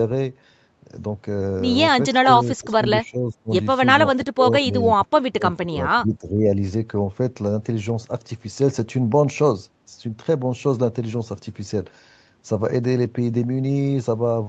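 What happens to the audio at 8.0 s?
At 8.0 s the speech comes through intact, with only the usual band limit of the call path, which leaves nothing above 8 kHz.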